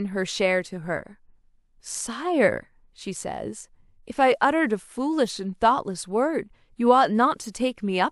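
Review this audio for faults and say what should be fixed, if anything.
A corrupt frame decoded at 7.42 to 7.48 s puts a brief chirp, squeak, blip or burst of noise into the speech. One damaged frame played with misread values lands energy at wrong frequencies. Unlike a dropout, it adds wrong sound rather than only removing it. Checksum each frame so the decoder conceals damaged frames instead of playing them.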